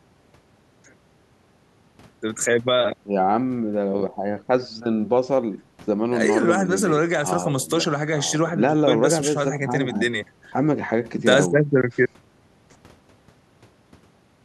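Listening to the speech recording, nothing stood out as a technical problem at any point.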